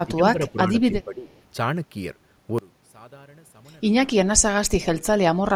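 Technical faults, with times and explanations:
0.04–1.33 s and 4.84–5.0 s, speech suppressed in double talk: the speech dips by about 10 dB for roughly a second, then briefly by about 20 dB. This is likely an echo canceller mistaking overlapping far-end talk for echo. Unlike a network dropout, the level is pulled down partially rather than cut to silence.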